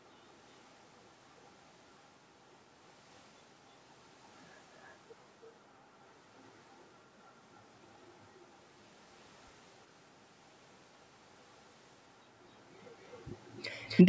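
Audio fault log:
4.83 s to 4.93 s, echo leak: the far end's echo canceller likely let loudspeaker pickup through, sending back a very faint scrap of speech delayed by 325 ms.
13.04 s to 13.20 s, 13.45 s to 13.64 s, 13.86 s to 14.04 s, echo leak: uncancelled loudspeaker sound likely returned three 263 ms-delayed scraps, the first two equally faint and the last louder, about 25 dB below the speech.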